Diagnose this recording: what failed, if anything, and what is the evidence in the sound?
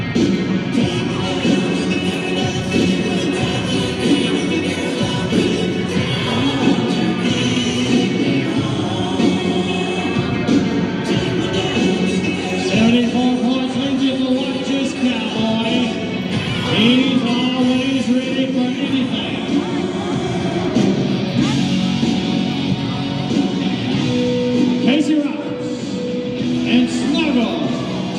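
Adaptive stream at a lower bitrate, a network-stage fault. From 5.29 to 7.29 s the treble drops suddenly, with nothing above 14.6 kHz, and codec artefacts rise. There is no gap. This fits a brief switch from 96 kbit/s AAC to 24 kbit/s HE-AAC.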